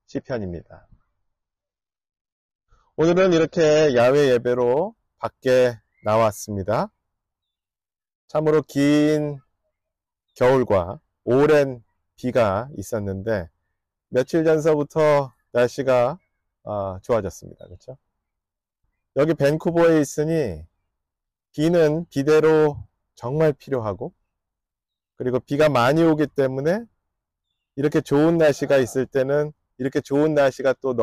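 From 0.0 to 4.0 s, an adaptive stream starting at a low bitrate sounds dull, with nothing above 6.9 kHz; the spectrogram's flat ceiling then lifts abruptly, gaplessly.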